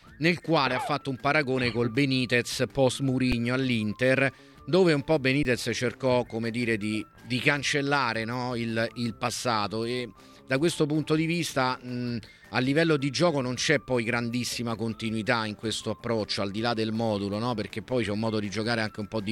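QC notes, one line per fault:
3.32 s and 5.43–5.45 s, underrun with held sample: the output buffer ran dry twice, for 5 ms and then 20 ms, and the converter held its last value until data returned, so the waveform flattens and the sound stops with almost no click. Live audio was lost during each gap, a few milliseconds and then about 20 ms, so playback resumes at a jump.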